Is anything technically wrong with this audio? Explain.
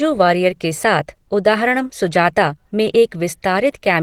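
Yes. Throughout the speech there is plainly audible Opus compression damage, likely from low-rate Opus in hybrid mode, which fits about 16 kbps. Bands short of bits are noise-filled, so the sound turns hoarse and grainy. A spectrogram shows smeared, noisy upper bands extending to about 20.2 kHz, without clean gaps.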